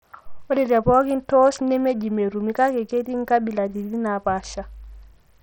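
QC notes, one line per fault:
Throughout: Bluetooth SBC compression, likely. The speech has dull, flickering treble and gritty grain as the upper sub-bands are starved of bits and the rest coarsely quantised, which fits heavy SBC coding at about 64 kbps. On a spectrogram, the top bands blink in patchy blocks.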